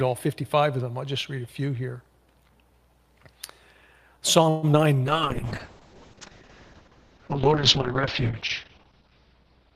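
Call audio freeze at 4.49 to 4.65 s: the last sound is stretched into a fading buzz or hiss for about 133 ms, likely because held-up packets drained the jitter buffer. It then resumes where it stopped.

Short concealed packet loss at 4.73 to 4.75 s: about 20 ms of audio never arrived, and the receiver extrapolated over the hole, leaving a brief smear or wobble.

Call bitrate drop from 5.07 s onward: the encoder falls from 40 to 6 kbps, with the top end cut from 20 kHz to 6 kHz, so the sound turns muffled and watery.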